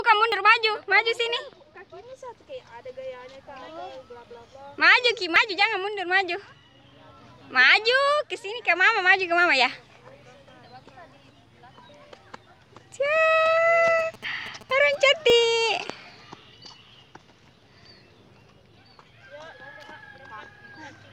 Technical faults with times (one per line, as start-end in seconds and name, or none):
0.32 dropped buffer (overrun)
5.36 dropped buffer (overrun)
13.99-14.95 GSM signalling bursts
15.30 dropped buffer (overrun)